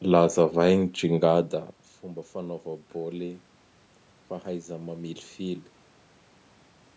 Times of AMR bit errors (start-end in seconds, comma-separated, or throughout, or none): none